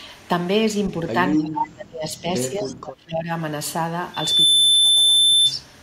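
A speech recording with three kinds of fault. From 1.39 to 2.31 s and again from 2.48 to 3.29 s, the voice dips and breaks up. The deepest drops are roughly 30 dB and 25 dB. This is likely speech suppressed in double talk: an echo canceller confused the talker with returning echo and turned both down. At 1.63 to 1.67 s a brief delayed copy of the voice cuts through. It sits about 260 ms behind and only about 5 dB below the speech. This is likely an echo leak, where a loudspeaker's pickup escaped cancellation and was sent back. From 4.14 to 5.53 s a loudspeaker feedback squeal takes over. A single 3.5 kHz tone swells within about 0.3 s to about 10 dB above the signal. Microphone and loudspeaker form a loop with gain above one at that frequency.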